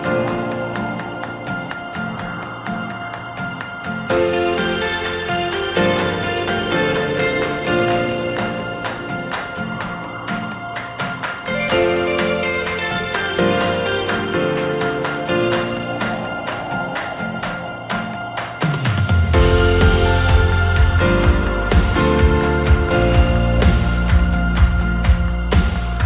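No technical faults can be heard anywhere in the recording. It comes through a WebRTC call path, and its narrowband character, with nothing above 4 kHz, fits the G.711 mu-law codec at 64 kbps.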